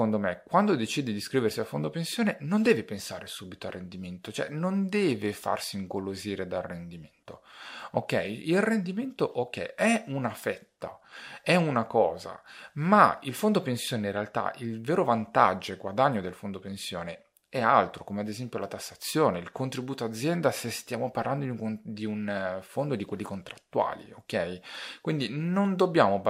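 Listening to this speech recording, nothing technically amiss stood out at any point.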